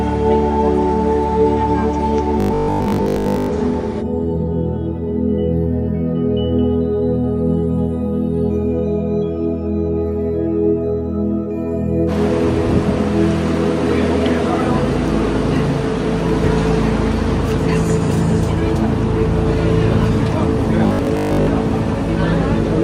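From 2.40 to 3.48 s and 20.87 to 21.47 s, robotic sound from repeated short buffers gives a metallic 50 Hz buzz, likely from most audio being replaced by repeated 20 ms chunks.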